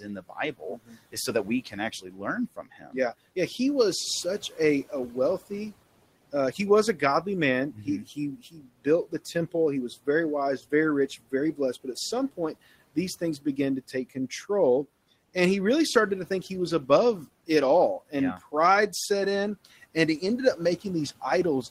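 Soft consonants and word endings sound swallowed at 0.01–2.95 s, 4.5–5.51 s after "was such", 6.32–9.53 s, 10.06–14.31 s and 19.65–20.85 s after "set in". This is speech cut by the noise suppressor. It mistook quiet speech for room noise and turned it down by up to about 19 dB.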